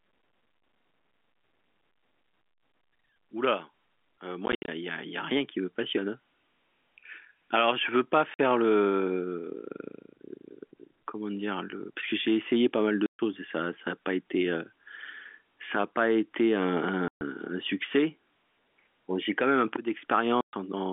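Packet loss filled with silence cuts holes in the speech at 4.46–4.68 s, 8.34–8.39 s, 13.06–13.19 s, 17.08–17.21 s and 20.41–20.53 s. Missing packets play as dead silence. The first hole is broken into short gaps. The gap lengths fit 10 ms packets. Each edge is hard.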